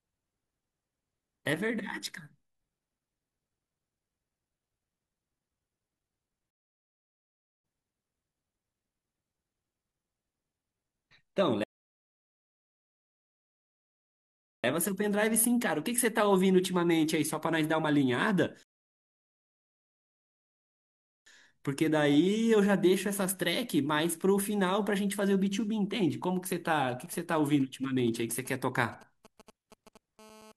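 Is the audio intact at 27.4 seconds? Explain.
No. At 27.4 seconds you're inside a stretch of GSM signalling bursts that runs from about 27.06 to 30.2 seconds. A 2G phone close by is handshaking with the network, sending short clusters of radio pulses, and something in the audio chain rectifies them into sound. You get that galloping dit-dit-dit of brief buzzes at the 217 Hz pulse rate, sitting roughly 25 dB under the speech.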